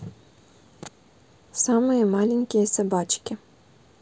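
No technical faults are audible.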